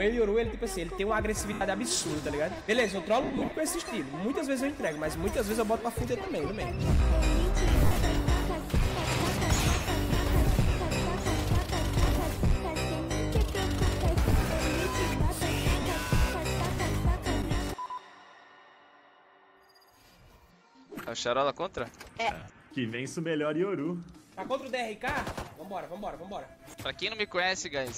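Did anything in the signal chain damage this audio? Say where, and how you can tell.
Yes. The damage is on the wireless link: lost LE Audio frames. Gaps appear at 1.53 to 1.61 s, 3.23 to 3.57 s, 7.80 to 7.96 s, 15.82 to 15.86 s and 22.40 to 22.50 s. The longest, near 3.2 s, loses about 200 ms, scattered over 340 ms in short runs, the longest around 50 ms. In each gap the sound turns into a noisy smear. The decoder repeats the last spectrum with random signs and fades it. The timing fits 10 ms frames.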